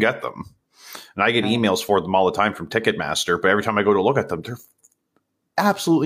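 No technical fault can be heard anywhere in the speech recording.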